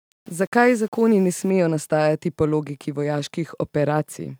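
From 0 to 1.5 s the speech was likely reduced to low bit depth without dither, rounded onto a coarse grid that fits 8 bits. The rounding error follows the signal, roughly 35 dB down, so the sound is grainy and gritty until "nastajati po logiki".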